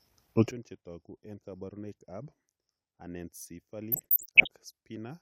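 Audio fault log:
0.51 s onward, sudden gain jump: at 0.51 s the speech and its background noise drop together by about 24 dB and stay low to the end, with no fade. This is likely a digital gain setting applied between two samples without any ramp.
3.92 to 4.47 s, DAB burbling: the speech is overlaid with short blips of noise in single frequency bands. This fits weak DAB reception, with a percent or two of bit errors slipping past error correction and corrupting roughly two dozen MP2 frames.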